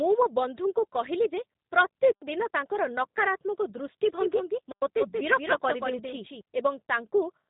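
Throughout, the speech carries the G.729 codec's character: nothing passes above about 3.8 kHz, and the damage is plainly audible. The codec rebuilds each 10 ms frame from a vocal tract filter, a pitch estimate and a handful of pulses rather than the actual waveform, so the speech sounds slightly rough and synthetic. The muffled top and the texture point to G.729A at 8 kbit/s.

At 2.12 s, a gap between chunks cuts in: 100 ms of silence with hard edges on both sides, lasting until 2.22 s. The audio arrived in chunks of 2.5 s, and silence was left at this join, so a hole opened in the stream. Nothing is lost across the hole, but the speech stops dead and then resumes exactly where it left off.

From 4.05 s to 6.41 s, a doubled audio track is present. A second full-band copy of the speech runs about a fifth of a second behind the original, a few dB quieter. It has no decay or room colouring, so it sounds like a dry, exact repeat rather than reverberation. 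It starts and stops abruptly at those times, which points to a likely cause of a second capture path or an edit holding two misaligned copies.

At 4.72 s, inside the doubled stretch, a second gap between chunks of the same kind appears. It is another hard-edged 100 ms silence, ending at 4.82 s. It falls at the next 2.5 s chunk boundary, so it confirms the regular spacing of the first gap.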